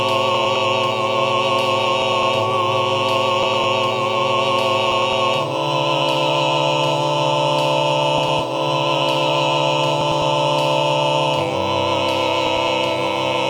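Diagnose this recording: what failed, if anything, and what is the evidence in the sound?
Frames out of order at 0.35, 2.02, 3.43, 4.92, 8.18, 10.01 and 12.47 s, each lasting about 0.21 s. At the network or decoder-input stage, two adjacent blocks of about 105 ms swapped places, which fits four-frame runs. Each stretch plays with its halves exchanged, causing a brief garbled flutter and no lost time.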